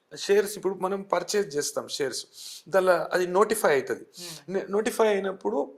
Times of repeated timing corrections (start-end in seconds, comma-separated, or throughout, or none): none